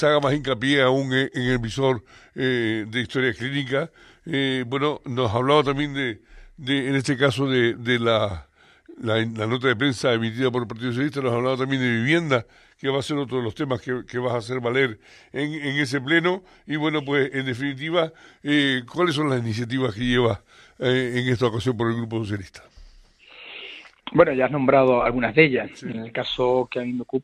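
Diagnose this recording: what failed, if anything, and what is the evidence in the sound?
Nothing failed; no fault is audible anywhere.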